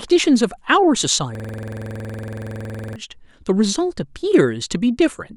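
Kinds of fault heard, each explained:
System hang loop: the system froze while the sound hardware kept replaying one ring buffer, so from 1.35 to 2.96 s a 46 ms slice of speech (fitting a 2048-sample buffer) repeats dozens of times as a 21.5 Hz stutter. Waveforms show identical repeating blocks; spectrograms, evenly spaced vertical stripes.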